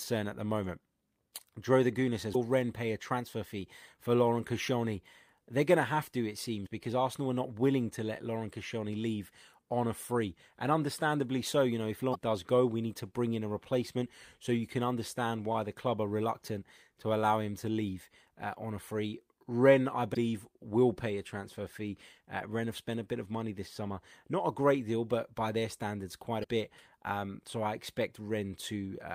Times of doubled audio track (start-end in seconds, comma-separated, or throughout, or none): none